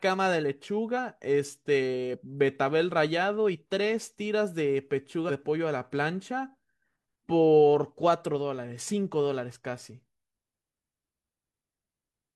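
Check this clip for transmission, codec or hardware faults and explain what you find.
Two short bursts of damaged data in a compressed stream break into the speech. At 0.93 to 0.99 s and again at 5.25 to 5.31 s, each lasting roughly 55 ms, a brief glitch replaces the voice. Part of the compressed speech data arrived corrupted at these points, so the decoder could not interpret those frames correctly and lost its place in the stream until it resynchronised on a clean frame header.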